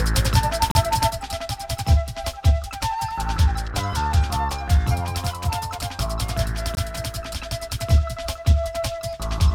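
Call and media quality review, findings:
Gap between stream segments, 0.71 s and 6.75 s: hard-edged silent holes of 37 ms and 20 ms, 6 s apart. Segment timestamps don't meet, so the player pads with silence; no audio lost.

One channel drops out, 1.10 s to end: level falls abruptly by about 6 dB and stays down. Likely a lost stereo channel, halving shared content in the mono sum.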